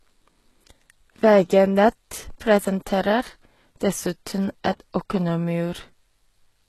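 Speech runs the full length with plainly audible HE-AAC compression damage: treble sounds synthetic, with gritty, lispy s sounds, likely from spectral band replication at a rate fitting about 16 kbps. A spectrogram shows copied, blocky upper bands and nothing above 12.3 kHz.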